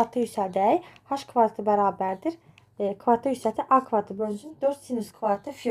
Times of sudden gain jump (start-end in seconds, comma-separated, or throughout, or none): none